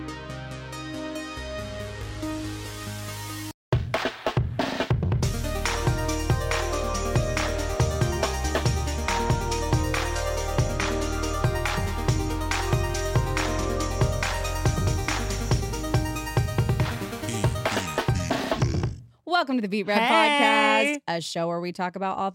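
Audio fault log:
No faults detected.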